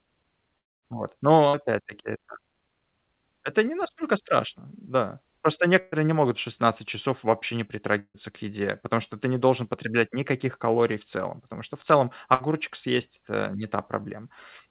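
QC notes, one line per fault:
0.59–0.85 s, long network dropout: about 240 ms of audio is lost. The last sound is stretched into a fading fill that sinks toward silence, then sound resumes further on, likely from a stalled network stream. It differs from a packet-loss burst because the gap is long enough for the concealment to decay away.
1.48–1.71 s, burst of packet loss: roughly 60 ms is missing, bridged by a short held continuation of the preceding sound before playback picks up later. The fill covers nearly the whole gap, which separates it from a dropout.
5.80–5.95 s, burst of packet loss: just before "не могут", about 120 ms drops out. The receiver holds the previous sound and turns it down across the whole gap, never reaching silence, so it reads as a brief smeared continuation rather than a cut.
7.99–8.17 s, long network dropout: between "часов вообще не" and "к еде потому что", about 150 ms is lost, likely a network stall. 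The held sound fades out and leaves roughly 70 ms of near-silence. That audible dead stretch marks it as a dropout, not a short burst.
12.34–12.43 s, burst of packet loss: right after "потому что в целом", about 60 ms goes missing, covered by a quick decaying continuation of the last sound. The concealment fills the entire gap with no dead air, unlike the dropouts. Throughout, the call codec passes nothing above 4 kHz, which fits G.711 mu-law at 64 kbps.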